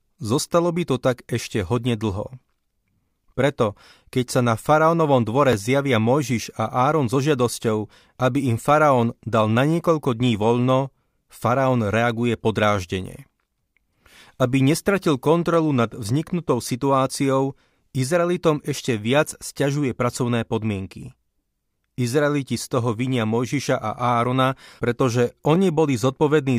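Speech, with overlapping chunks. Three short stutters land at 5.53 s, 15.54 s and 25.55 s, spaced 10 s apart. The first follows "na faraónovom dvore". The second comes just before "nad vzniknutou situáciou". The audio was handled in 10 s blocks, and each block began 12 ms before the previous one ended. That 12 ms slice plays twice at every join. The doubling is heard as a brief click or hiccup.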